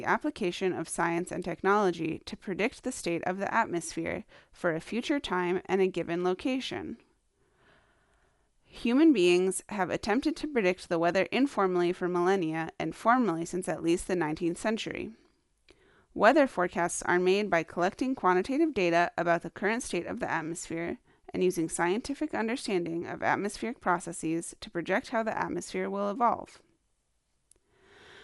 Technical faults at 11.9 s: Dolby Digital compression

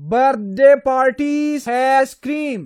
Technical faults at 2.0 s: damaged data in a compressed stream

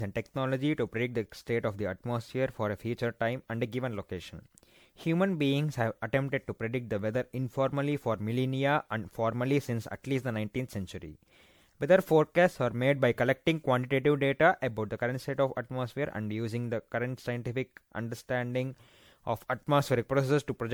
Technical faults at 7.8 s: generation loss

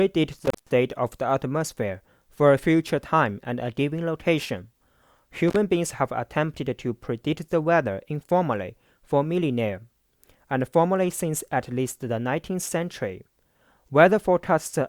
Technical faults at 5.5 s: intermittent contact

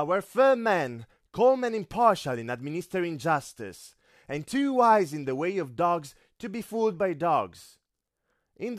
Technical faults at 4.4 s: none

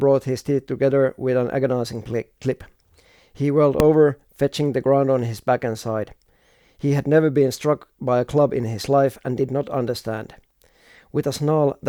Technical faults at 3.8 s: invalid numbers at full scale

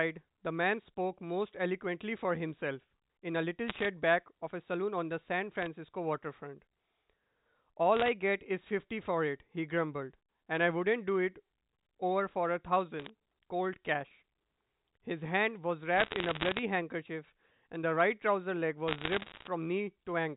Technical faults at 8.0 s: bit errors on a digital phone line

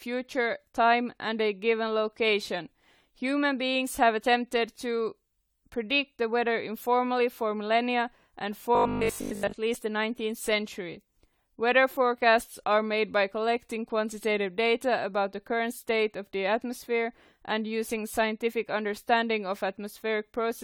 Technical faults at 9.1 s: generation loss; robotic sound from repeated short buffers

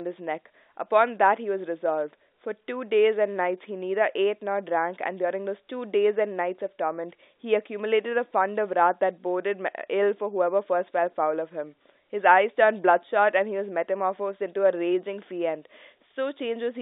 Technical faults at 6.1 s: none

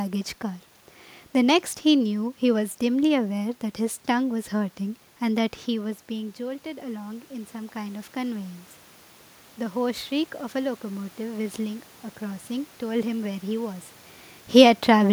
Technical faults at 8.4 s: automatic gain rising

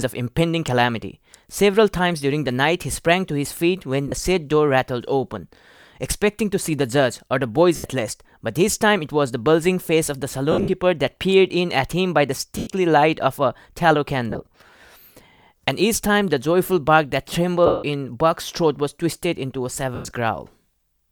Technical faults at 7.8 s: lost LE Audio frames

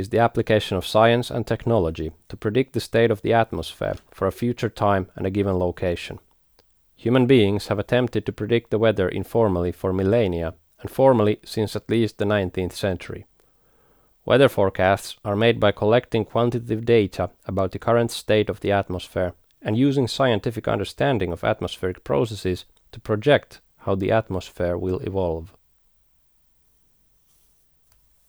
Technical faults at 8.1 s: none

